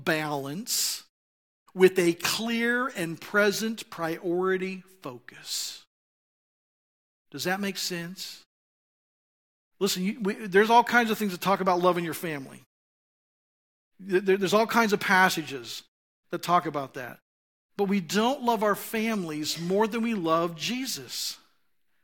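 Nothing stood out as a fault on listening to this speech recording, and the muting of the background during the pauses, which returns in time for each phrase, is working as intended.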